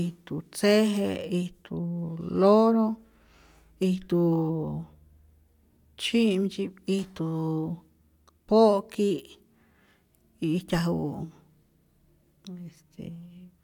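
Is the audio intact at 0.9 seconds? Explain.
Yes, at 0.9 seconds the speech plays through without any audible fault.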